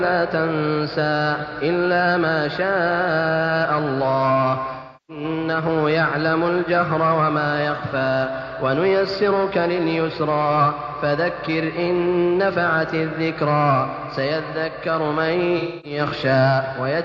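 At 4.75 s the sound turns smeared and phasey for about 0.34 s, until 5.24 s, which fits roughly eight lost frames. This is AAC frame loss with concealment: the decoder, missing those frames, rebuilds output from the last good spectrum with altered signs or interpolated energy instead of the real content. The same fault returns from 15.58 to 15.99 s, about 0.26 s this time, which points to around six frames.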